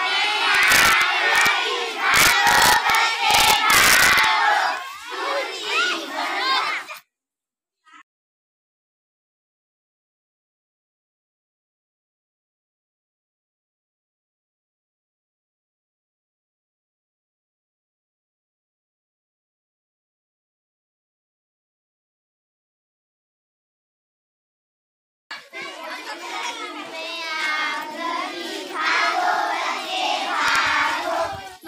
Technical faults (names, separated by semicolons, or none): integer overflow